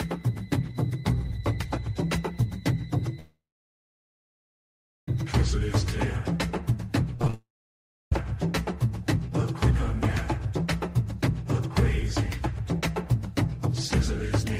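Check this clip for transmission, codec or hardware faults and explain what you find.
Transmission faults are present: two long network dropouts and a short burst of repeated packet loss.

From 3.19 to 5.08 s, and again from 7.34 to 8.12 s, the sound smears into a fading buzz and then about 1.7 s and 0.66 s of near-silence. This is likely a long network dropout: roughly 1.9 s and 0.78 s never arrived.

From 7.16 to 7.34 s, the audio turns choppy. This is repeated packet loss: five holes, the longest 34 ms, were patched by stretching earlier sound, covering about half the span.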